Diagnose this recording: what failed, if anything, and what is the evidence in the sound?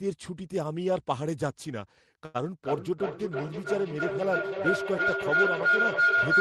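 A short stall from a late packet occurs at 2.25 to 2.36 s, at the network and jitter buffer stage. A packet missed its playout time and the buffer ran dry. The receiver stretched the last sound for about 89 ms until the packet arrived, then resumed from the same point. Nothing is lost, but one sound is held too long with a slight buzz or dip, and everything after it plays about 89 ms later.

A feedback howl starts at 2.65 s and runs to the end of the clip. This is an acoustic loop: a loudspeaker and microphone in the same room on the same call. Each trip around it adds level, so the repeats grow instead of decaying. They come roughly every 300 ms, the loop's delay, narrow to a tone around 1.5 kHz, and peak about 6 dB above the speech.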